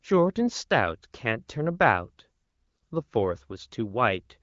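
No technical faults are audible.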